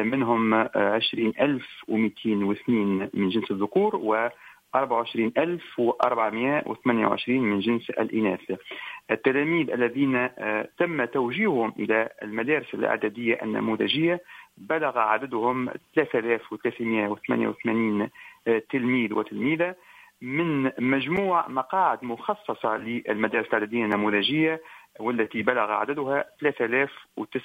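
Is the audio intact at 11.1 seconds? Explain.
Yes, the audio is intact at 11.1 seconds, with no dropout, click, distortion or other fault at that moment.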